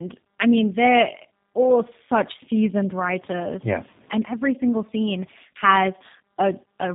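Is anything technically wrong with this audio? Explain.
Yes. Throughout the speech there is tandem speech coding. The audio was squeezed through a low-rate speech codec twice, consistent with two G.729A-style 8 kbit/s stages bridged by a G.711 link. The second coder re-encodes the first's artefacts, so the sound is rough, muffled and warbly, with nothing above 3.8 kHz. A single codec pass would be band-limited but noticeably cleaner, without this compounded graininess.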